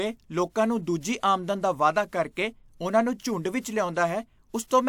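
A speech clip with pre-echo from 3.61 to 3.65 s, just after "ਉਨ੍ਹਾਂ ਦੇ ਝੁੰਡ". A short hiss leads a sharp attack by about 37 ms. The codec spread the attack's quantisation noise across its whole transform block.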